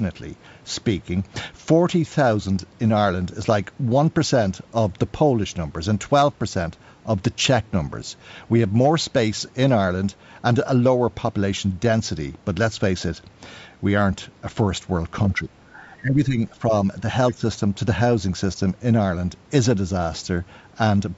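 From 15.38 to 16.73 s the speech sinks sharply, losing roughly 15 dB at its deepest across about a second in total. It dips again, briefly, from 17.32 to 17.43 s. This is likely speech suppressed in double talk: with both ends talking at once, the echo canceller could not tell this talker from loudspeaker echo and turned the whole signal down.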